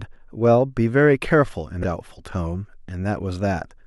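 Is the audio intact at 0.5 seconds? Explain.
Yes, the speech at 0.5 s plays through intact, with no audible dropout, click, distortion or other fault at that moment.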